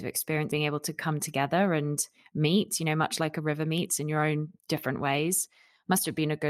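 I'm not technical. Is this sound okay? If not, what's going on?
No, there are two problems.

The first is a skip ahead at about 0.51 s. Roughly three-quarters of a second of speech is simply missing. The playback system threw away a stretch of audio, probably because too much had piled up waiting to play. It then jumped straight to the newer audio. There is no silence at the join. The two sides are stitched together directly, so the speech suddenly lurches forward.

The second is a jitter buffer speed-up from about 2.4 s to 4.5 s. Here the speech runs about 8 percent faster, but the pitch stays the same. The receiver had stored more audio than it wanted. To catch up, it kept cutting out tiny slivers of sound, removing around 150 milliseconds in total. The result sounds rushed across those two seconds.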